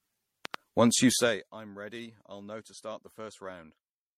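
Repeated lossy re-encoding has likely caused generation loss throughout: the speech sounds swirly, smeared and hollow, with nothing above 16.4 kHz, consistent with several MP3 passes around 64 kbit/s. From 0.45 to 0.56 s, a loud pop, likely an electrical transient, gives two sharp pops about 10 dB above the speech, which continues underneath.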